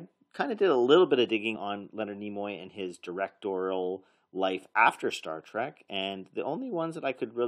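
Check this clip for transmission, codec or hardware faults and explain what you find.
One fault shows up in the speech: damaged data in a compressed stream, from 1.54 to 1.57 s, right after "a little bit of". Corrupted bytes make the decoder misread the frame and lose sync until it finds the next header, producing a brief glitch. A spectrogram shows a short break in the normal pattern, and the waveform shows a ragged discontinuity.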